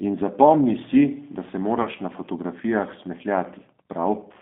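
From start to finish the speech passes through the G.729 codec at 8 kbit/s, which rebuilds the signal from a vocal tract model, a pitch predictor and a sparse set of pulses rather than sending the waveform itself. The line band runs from about 200 Hz to 3.6 kHz, so the top is cut away and the lowest bass is thin. The codec damage is plainly audible as a rough, slightly synthetic quality over the whole clip.

At 1.82 s a gap of about 30 ms in the incoming stream, which fits a single lost packet, forced the decoder into VoIP packet loss concealment. It filled the hole by extending its last pitch and filter settings while lowering the gain, and then had to rebuild its state once data returned. The result is a brief smeared stretch that fades, with the speech sounding weak and distorted until about 1.89 s.

From 2.71 s to the end, Wi-Fi interference appears. A nearby Wi-Fi radio is coupling into the audio circuit, and its beacon transmissions are being rectified into the signal. 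Those beacons repeat every 102.4 ms, so the sound is a steady ticking just under ten times a second. The ticking is faint, roughly 40 dB below the speech, and sits behind the band-limited codec sound as a regular mechanical pulse.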